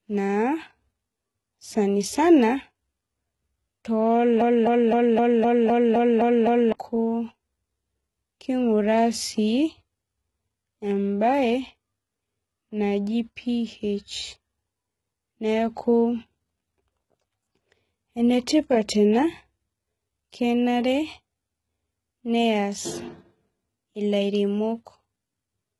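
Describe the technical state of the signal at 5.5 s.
At 5.5 s the audio sits inside a broken-record loop running from 4.41 to 6.72 s: a 257 ms fragment repeats exactly, back to back, nine times, likely because the player or stream stalled and kept resending its last piece. Unlike a stutter or dropout, the repeats are identical and the audio meant for that span is simply lost.

The same moment also carries the heavy codec damage present throughout, likely HE-AAC compression at a very low bitrate, around 16 kbps. The treble is rebuilt from copied lower bands rather than coded directly, so its harmonics don't line up with the lower spectrum. That gives s sounds a gritty, metallic or lispy edge instead of the plain dull top of a low-pass cut.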